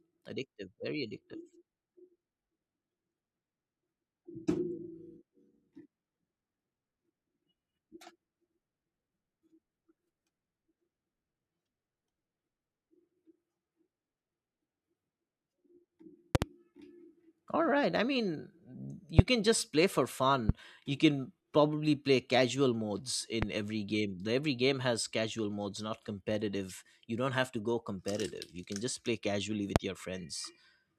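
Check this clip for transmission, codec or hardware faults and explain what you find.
Five loud pops cut into the speech in its second half. Loud pop: a double pop from 16.35 to 16.45 s, then single pops at 19.2 s, 20.5 s after "can just play for", 23.4 s between "probably play casual modes" and "every game", and 29.8 s after "can just play casually". Each is likely a sudden voltage step or pulse, from static or a contact glitch, added to the signal and shaped by the circuitry after it. They stand roughly 20 to 25 dB above the speech as sharp thumps while the talking continues underneath.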